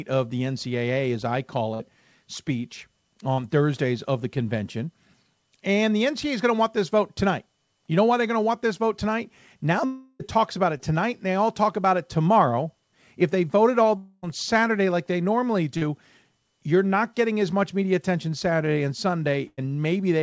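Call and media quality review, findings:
Burst of packet loss, 1.74–1.82 s and 19.47–19.59 s: consecutive packets lost (about 60 ms, then about 100 ms). The decoder extends the last sound and fades it, giving a held buzz or hiss. The later gap ends with a brief silence. Audio resumes past the missing section.

Short concealed packet loss, 3.34–3.40 s, 10.77–10.81 s, 15.77–15.83 s: 20–40 ms of packets late or lost. Concealment bridges from the preceding pitch or noise and blends back in, giving a short smear or wobble. A brief consonant can drop out.

Long network dropout, 9.86–10.21 s and 13.97–14.24 s: a sustained stall, likely a network outage, losing about 340 ms and about 260 ms. The fill continues the last sound as a fading buzz/hiss right to the end, with no silent stretch. Playback rejoins later with that audio gone. The G.722 path at 64 kbps holds content below 8 kHz throughout.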